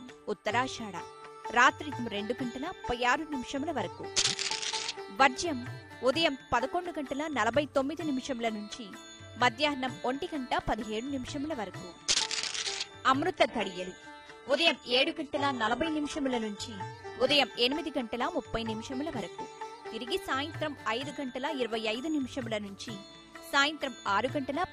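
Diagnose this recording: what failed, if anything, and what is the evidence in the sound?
Network stage: adaptive stream at a lower bitrate, 13.36 to 17.36 s. Nothing remains above 11.5 kHz after a sudden, gapless switch, which fits a very low-rate HE-AAC rendition.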